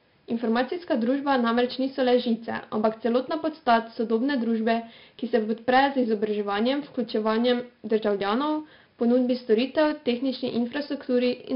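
Throughout, heavy 4-bit ADPCM compression's coarse steps add gritty hiss on loud speech; spectrograms show level-following broadband noise and nothing above 5.3 kHz, fitting a low sample rate.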